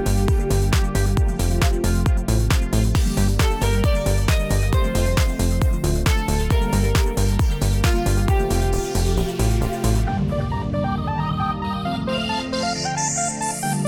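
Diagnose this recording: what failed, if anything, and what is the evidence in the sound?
Nothing in the signal points to a failure at any stage of the chain, from capture and conversion through to storage and playback.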